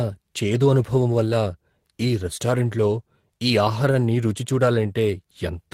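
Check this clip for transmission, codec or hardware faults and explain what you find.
No faults turn up on checking this clip.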